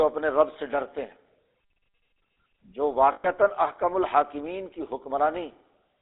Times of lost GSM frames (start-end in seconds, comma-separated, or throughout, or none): 3.12-3.27